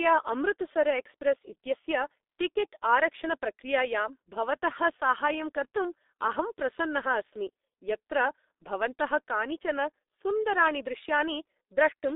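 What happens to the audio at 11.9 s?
At 11.9 s the speech is still passing through the G.723.1 codec, which affects the whole clip rather than just this moment. This early internet-telephony coder splits the signal into 30 ms frames and rebuilds speech from a coarse, slowly updated model at a very low rate, which fits about 6 kbit/s. Nothing survives above 3.8 kHz, and the band sits roughly between 250 Hz and 3.7 kHz, so the speech sounds muffled and hoarse, with smeared consonants.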